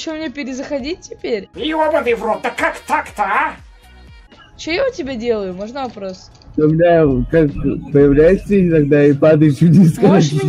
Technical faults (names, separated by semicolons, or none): none